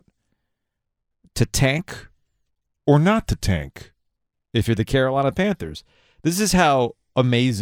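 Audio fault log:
1.88–4.04 s: wrong sample rate. For this stretch the speech drops into a lower, slower register. Both speed and pitch fall together, and none of the independent shifts a time-stretch or pitch-shift would leave are present. The audio runs at 0.919 times normal speed, about 1.47 semitones flat. That ratio points to material captured at 48 kHz being clocked out at 44.1 kHz with no resampling step, so every sample is held slightly too long.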